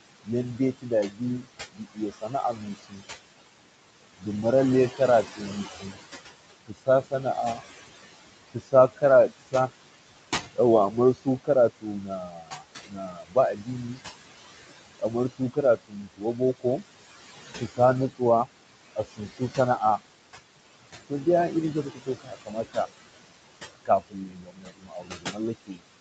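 A noise suppressor runs over the whole recording, pulling down the frequency bands it judges to be steady background by about 20 dB, frame by frame. The room noise, sitting about 11 dB below the speech, drops away in the gaps and comes back up beneath each phrase.

The same suppressor also misreads parts of the speech as noise and cuts them down with the background, by about 19 to 21 dB at the deepest. This happens in six spans: 0.25 to 3.04 s, 4.18 to 9.54 s, 10.54 to 13.98 s, 14.99 to 20.0 s, 21.1 to 22.77 s, and from 23.75 s to the end. Within these spans, roughly a second and a half of speech is affected in the first, third and fourth, about a second in the second, and around half a second in the fifth. There, soft consonants and word endings sound swallowed or fade out.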